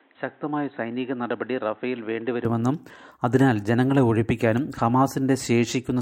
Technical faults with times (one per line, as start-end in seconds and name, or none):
0.00-2.45 input switched to a poorer device